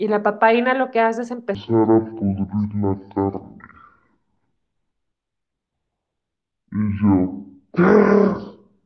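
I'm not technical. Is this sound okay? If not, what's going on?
No. A wrong sample rate problem starts at about 1.55 s and lasts to the end. From there the speech plays at half its proper speed and drops a full octave (12 semitones), so it sounds low, slow and dragging. The recording was made at one rate but played back at roughly half that rate, which fits a 44.1 kHz recording played at about 22 kHz. Nothing corrected the difference, so speed and pitch fell together.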